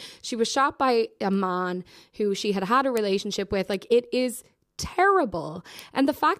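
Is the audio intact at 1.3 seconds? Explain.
No. At 1.34 s a single sharp tick cuts through the speech, broadband and unrelated to it, peaking at about -24 dBFS. This is a bit error spike: one flipped bit throws one sample off by a power of two before it returns.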